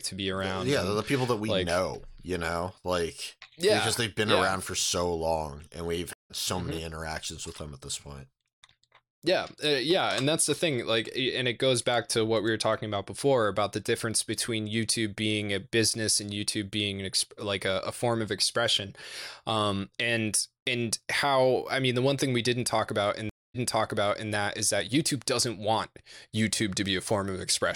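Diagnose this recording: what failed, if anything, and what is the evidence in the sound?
Network side, a stream reconnect, twice. At 6.13 s, after "so long and we've", a 165 ms gap resumes about 150 ms further on. At 23.29 s, after "didn't talk about in", 247 ms of silence, then audio from 766 ms earlier replays, starting with "that is that". Each time a fresh decoder rejoins mid-stream.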